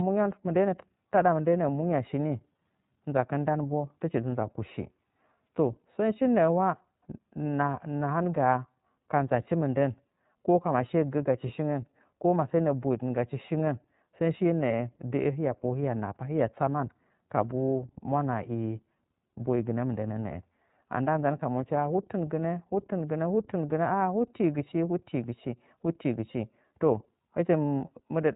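From start to finish the speech carries iLBC codec damage, plainly audible. Each 30 ms frame's excitation is coded on its own, with no help from the previous frame, and the roughness fits iLBC's 13.33 kbps mode. The voice comes through intelligible but slightly buzzy and synthetic. On a spectrogram, energy stops abruptly at about 3.8 kHz with an empty band above, and the harmonics look grainy, with discontinuities repeating at frame boundaries.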